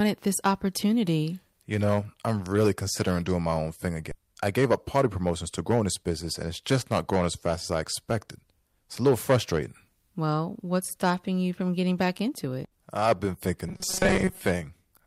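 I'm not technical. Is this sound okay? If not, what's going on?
No, it has four problems. Throughout, the recording was driven too loud for the equipment, so peaks get cut flat. This hard clipping adds a rough crackle whenever the speech gets loud.

At 4.11 s, about four tenths of a second of audio was thrown away. This skip ahead makes the speech jump forward with no gap.

From 4.22 to 6.11 s, a jitter buffer speed-up trims tiny slices to catch up, so the talking runs about 9% faster at the same pitch.

From 13.68 to 14.45 s, a robotic sound from repeated short buffers turns the speech into a metallic buzz near 188 Hz, likely from tiny snippets being looped while new audio arrives late.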